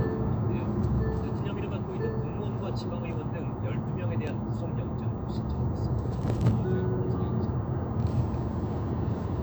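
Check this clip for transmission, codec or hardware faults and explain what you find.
Nothing here points to a transmission, codec or hardware problem; the sound comes across steady and intact the whole way.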